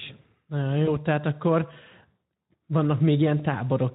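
The clip is speech carried over Speex at a light setting, with two brief breaks from VoIP packet loss concealed by the speech codec. The first is at 0.85–0.97 s, just before "tehát akkor"; the second is at 3.38–3.46 s. Each fits one missing 20 ms packet. Instead of going silent as a plain dropout would, the decoder stretches its last pitch and filter into a short buzzy tone or coloured noise that fades. The distortion then lingers for tens of milliseconds after audio resumes, while the decoder's state recovers.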